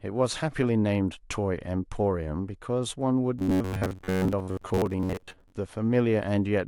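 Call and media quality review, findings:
Robotic sound from repeated short buffers, 3.39 to 5.52 s. Speech becomes a rigid metallic buzz at 93.8 Hz, still loosely tracking the syllables. Likely cause: jitter buffer or playout underrun concealment. Fresh audio arrives too rarely, so a segment of about 10.7 ms gets replayed. Most of the real audio in that stretch is skipped. The repeat rate sets the fixed buzz pitch.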